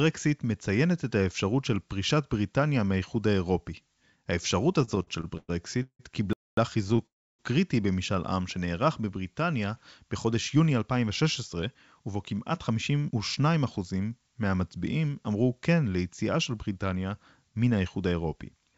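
Speech carried over a call link, its spectrum stopping sharply at 7 kHz as expected for a G.722 path at 64 kbps, with several network and playback faults. From 4.82 to 6.01 s there are repeated stalls (stutter): seven short breaks, the longest 169 ms, totalling 395 ms, so about a third of that stretch is filled with continued sound rather than new speech. Packets were arriving late, the jitter buffer kept running dry, and the receiver stretched out the last sound each time. The speech drags and hiccups, though none of it is lost. On a spectrogram the breaks appear as smeared, repeated copies of the preceding spectrum, the longer ones fading, and the waveform shows looped segments. A second, lighter burst of the same stutter comes at 6.84 to 7.00 s: four gaps of no more than 18 ms, covering 47 ms in all, heard as a rapid flutter. Between these, a playback stall at 6.33 to 6.57 s cuts the sound dead for 243 ms, most likely because the player ran out of data or its thread was blocked. 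It shows as a flat line in the waveform and a blank column across the spectrogram. Then at 7.06 to 7.41 s comes a call audio freeze. The last sound is held briefly as a buzzy tail that decays, and about 300 ms of silence follows before speech resumes. The likely cause is delayed packets emptying the jitter buffer, which pushed everything about 327 ms later without dropping content. It looks like a short, fading smear followed by a clear gap. From 10.05 to 13.65 s, a jitter buffer speed-up plays the speech at about 107 % speed at unchanged pitch. The buffer had built up surplus delay, and the receiver trimmed roughly a third of a second by cutting out pitch-period-sized slices many times over, so delivery sounds hurried. Syllables look slightly compressed in time while harmonic spacing stays the same. Finally, at 14.87 s, dropped samples produce a single sharp click. A tiny fraction of a millisecond was likely lost from the stream, so the waveform jumps abruptly and the spectrogram shows one thin vertical line spanning the band.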